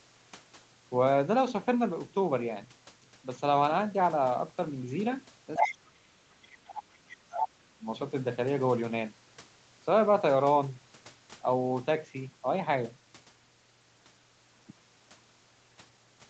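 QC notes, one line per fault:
5.56–5.76 s, 6.71–6.79 s and 7.39–7.48 s: other side's voice leaking through. The echo canceller likely failed to strip the loudspeaker playback from the microphone signal, so a second voice breaks through in short scraps. The first burst, about 0.2 s long, is roughly as loud as the main talker. The one at 6.71 s is much fainter, well below the speech, and the one at 7.39 s sits only a little under it.
5.58–7.42 s and 7.78–7.85 s: speech suppressed in double talk. With both sides talking at once, the echo canceller likely could not separate the near talker from the echo and turned everything down. Over the first stretch, nearly two seconds, the main voice sinks by as much as about 30 dB, fading and breaking up while the leaked voice appears. The brief dip at 7.78 s is shallower, around 10 dB.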